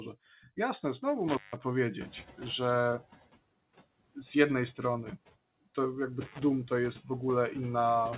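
All the way through there are noise suppressor artifacts. The background gets pulled down by about 19 dB, frame by frame, so the noise floor dips in the gaps between words and creeps back up underneath the speech, which gives it a pumping feel. The whole thing also stops dead at 4 kHz, which fits a G.711 mu-law call leg at 64 kbps.

At 1.28 to 1.62 s there's an intermittent contact, like a loose plug or cable opening up for about 157 ms. The speech drops out with a crackle at either edge, and a faint hiss fills the hole. It happens again at 6.22 to 6.39 s, this time for about 92 ms.

Around the two-second mark the room noise jumps by roughly 20 dB, and you can hear the noise suppressor catching up from 2.0 to 3.07 s. Its noise estimate lags, so at first the noise only gets cut by about 11 dB and comes through with less reduction. Then it settles down over about 1.07 s as the estimate adapts.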